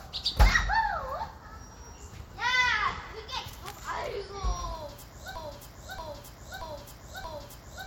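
It's a sound recording, and at 5.36 s it turns into a broken-record loop: a 0.63 s slice repeats exactly, back to back, four times until the clip ends. Whatever should have played there is gone, likely because the player or stream stalled and kept resending its last fragment.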